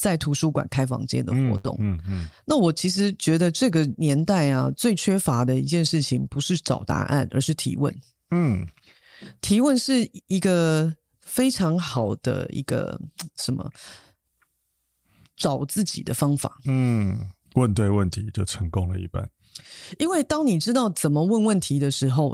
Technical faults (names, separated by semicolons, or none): burst of packet loss; lost packet rebuilt from error correction